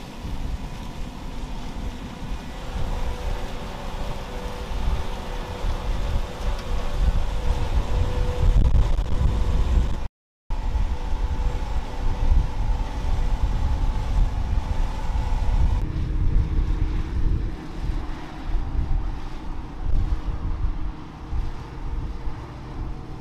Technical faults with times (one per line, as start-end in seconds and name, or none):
10.06-10.50 playback stall